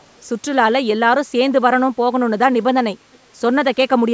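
From 0.00 to 0.19 s and again from 3.13 to 3.18 s, a very faint delayed copy of the speech trails in, about 0.42 to 0.44 s behind. This echo leak likely comes from a far-end speakerphone whose echo canceller let residual pickup through.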